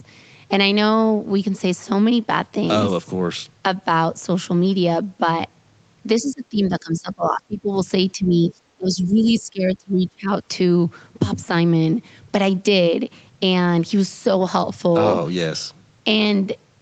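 From 6.21 to 7.73 s and again from 8.13 to 10.3 s, the speech dips and breaks up, by roughly 20 dB and then 25 dB. This is speech suppressed in double talk, likely an echo canceller ducking the near talker while both sides spoke. The waveform shows sunken stretches, and the spectrogram thins or goes blank.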